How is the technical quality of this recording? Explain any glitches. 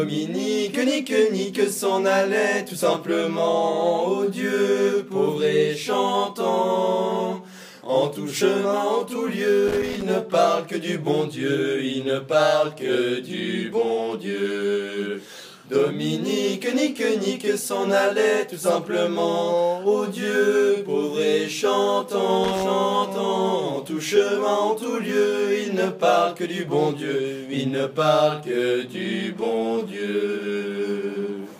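Two short bursts of loose connector crackle, from 9.68 to 10.02 s and 22.44 to 22.63 s. A worn contact keeps making and breaking, chopping the signal into irregular scratchy crackle.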